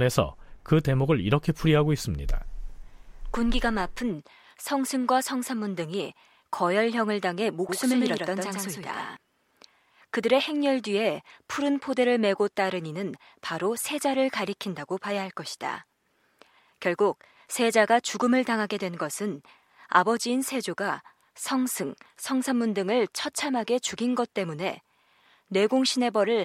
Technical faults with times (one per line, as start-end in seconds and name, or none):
7.69-9.17 doubled audio track